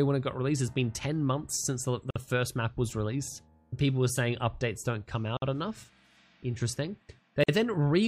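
Three short silences of about 50 ms break the sound at 2.11, 5.37 and 7.44 s. These are gaps at the joins of encoded pieces, where separately encoded chunks were stitched together without trimming their padding.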